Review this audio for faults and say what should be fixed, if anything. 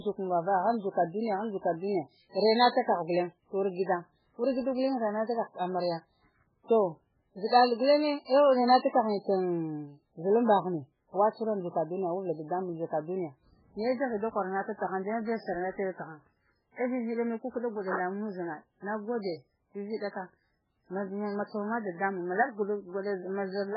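Heavy MP3 compression damage runs through the whole recording. Nothing is heard above 5.2 kHz, where the treble stops at a hard cut-off. The speech sounds watery and swirly. S sounds turn into metallic chirps, and attacks smear. The likely cause is an MP3 encoder starved of bits, zeroing weak frequency lines that flicker from frame to frame. The sound points to a bitrate near 8 kbps. Re-encode from the original source at a much higher bitrate.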